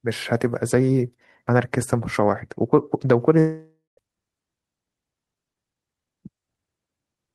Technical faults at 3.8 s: long network dropout

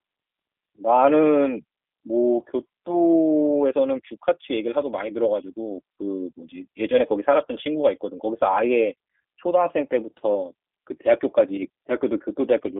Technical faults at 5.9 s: G.729 codec

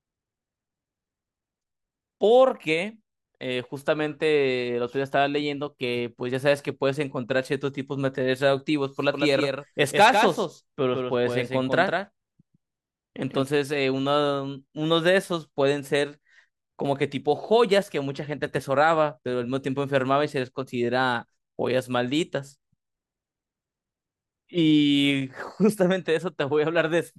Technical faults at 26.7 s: none

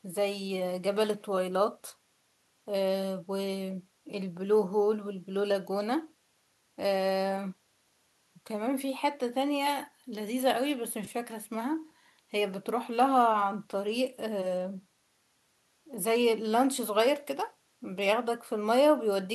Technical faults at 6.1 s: none

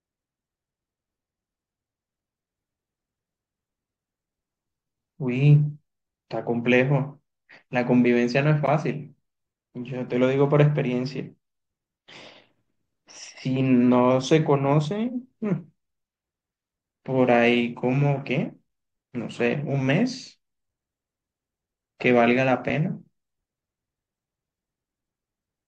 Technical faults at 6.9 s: none

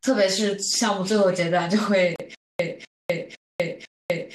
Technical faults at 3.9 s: stutter with silent gaps

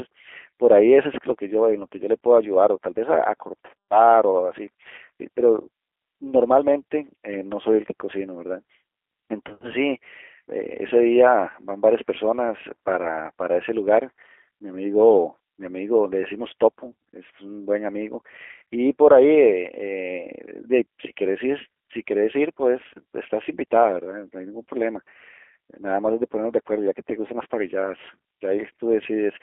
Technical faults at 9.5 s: G.729 codec; VoIP packet loss concealed by the speech codec

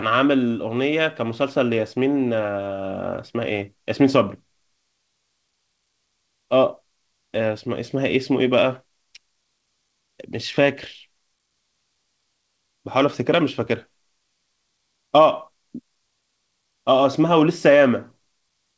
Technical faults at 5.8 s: none

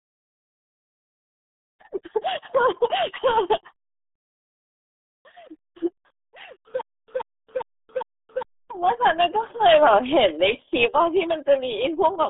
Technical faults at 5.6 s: RealAudio 14.4 codec

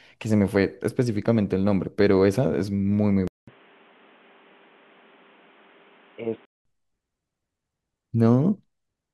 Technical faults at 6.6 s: input switched to a poorer device

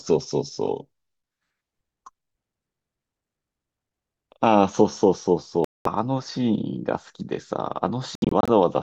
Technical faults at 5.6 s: Bluetooth dropout

